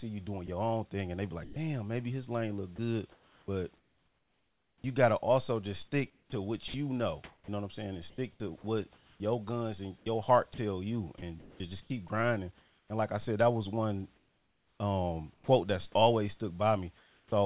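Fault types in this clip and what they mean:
Sound dropped by the voice detector: A single short gap where speech gives way to steady hiss and then returns, likely because the sender's detector judged a quiet stretch to be background and stopped sending. It happens at 0.46–0.48, 1.44–1.56 (about 60 ms of speech lost) and 15.34–15.48 s. It differs from chopping because each event is one isolated dropout, not repeated switching.
Sound chopped by the voice detector: Over 2.76–4.84 s and again over 6.1–12.9 s, the speech keeps breaking up. Word edges and quiet syllables repeatedly turn into featureless noise, about 1.4 s and 1.8 s of it in total, likely because the detector toggled on and off more than once. That repeated toggling is what separates it from a single dropout.
Comfort noise in place of the background: In the pauses at 14.16–15.48 and 16.98–17.32 s, the real room noise, already band-limited at 4 kHz by the call path, is replaced by a smooth, detail-free hiss, about 3 dB quieter in the second pause, likely generated at the receiver during discontinuous transmission. 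Only the background changes, which distinguishes it from the dropped or chopped faults.
Onset clipped by the voice detector: At 17.27 s, the speech resumes abruptly, with its first 50 ms cut off and the soft beginning missing. This is likely because the detector was slow to notice that sound had started again, so comfort noise covered the start. Unlike a dropout in mid-sound, the loss falls only at the beginning of speech, right at the end of a comfort-noise pause.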